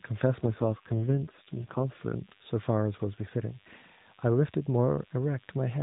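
From the first moment to the end, a thin, steady DECT cordless phone buzz sits roughly 30 dB below the speech. A nearby handset or base sends a radio burst every 10 ms, and the audio circuit rectifies it into a 100 Hz tone with many harmonics. On a spectrogram it shows as evenly spaced horizontal lines stacked up through the band.

From 0.42 s to 1.85 s there is an AMR rate drop. Across this stretch the speech turns rougher and more synthetic, with a buzzy edge, and then returns to the lighter narrowband character of the rest of the clip. The sound fits the codec falling from 12.2 to 5.9 kbps as the radio link weakened and bits were shifted to error protection. The waveform shows no gap, and the spectrogram keeps the same 4 kHz ceiling, but harmonic detail smears into coarser blocks.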